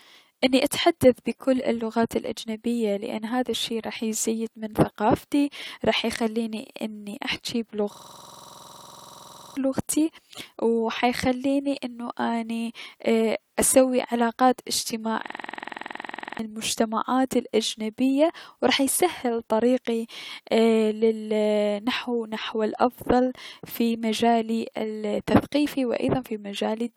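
A system hang loop struck twice, at 7.94 to 9.57 s and 15.28 to 16.39 s. The system froze while the sound hardware kept replaying one 46 ms buffer, which fits a 2048-sample ring. The speech becomes a rapid 21.5 Hz stutter. The first hang swallows about one and a half seconds before "لغتي و حيخليني انو", and the second about a second.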